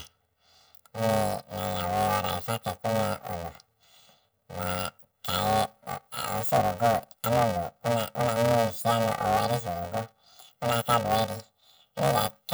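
Throughout, planar audio read as interleaved: 2.9 ms channel blocks, which fits a 128-sample block, give the speech a robotic 345 Hz buzz, seen as spectrogram harmonic striping.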